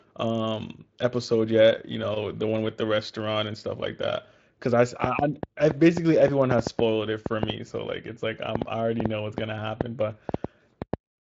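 From 5.04 to 10.95 s, a train of clicks ticks over the speech. About twenty uneven pops, 3.9 per second, stand well above it, likely from interference.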